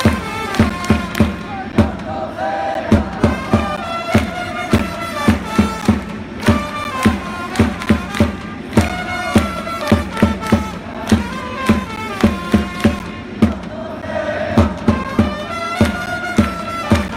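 Periodic USB or driver dropouts tick regularly from 0.70 to 17.09 s, every 1.024 s. Each time, roughly 10 ms of audio is blocked and replaced by silence.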